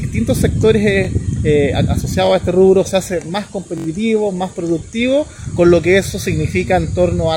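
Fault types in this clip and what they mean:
Repeated buffer: Late audio made the device replay its last 21 ms block, which fits a 1024-sample buffer. Brief stutters occur near 1.05 and 2.26 s, with a longer fourfold repeat from 3.78 to 3.86 s.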